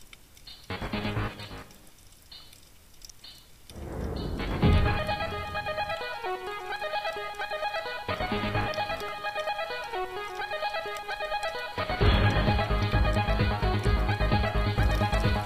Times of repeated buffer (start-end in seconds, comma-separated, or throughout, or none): 9.08